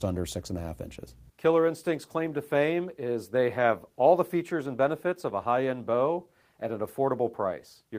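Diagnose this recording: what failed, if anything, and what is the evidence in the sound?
Nothing failed: no stage in the chain, from analogue wiring and conversion through buffering, processing, transmission, storage or playback, leaves any audible mark on this recording.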